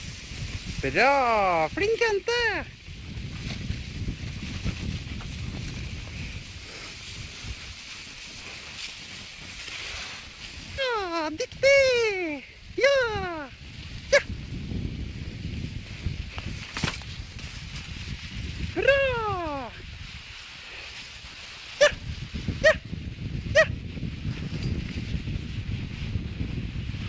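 At 10.78 s a skip ahead occurs: roughly one and a half seconds of audio is dropped and playback jumps straight to later material with no fill, so the two sides of the cut butt together abruptly. This points to the buffered backlog being discarded.

From 10.88 to 14.50 s a jitter buffer speed-up follows, running at 117% while short pitch-period segments are cut repeatedly, removing about 0.7 s in total. The sound is noticeably hurried at unchanged pitch. A milder speed-up, at 103%, runs from 15.74 to 17.03 s and trims only a few tens of milliseconds. The G.722 path limits content to below 8 kHz throughout.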